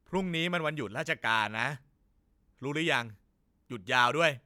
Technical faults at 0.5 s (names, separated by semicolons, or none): none